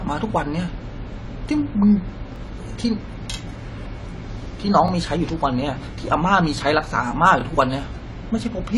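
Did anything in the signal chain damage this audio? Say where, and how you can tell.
Yes. At the codec stage, the speech is dull and smeared throughout, with nothing above 11.5 kHz. This is likely AAC compression at a low bitrate, around 32 kbps.

At the buffer stage, there are overlapping chunks. Stutters occur at 2.36, 4.88 and 7.41 s, about 2.5 s apart. Each chunk replays roughly 23 ms from the previous one's end.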